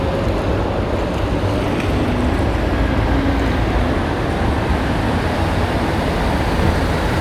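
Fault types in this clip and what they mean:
No technical faults can be heard anywhere in this sound recording; there are no interruptions or damage to the audio path.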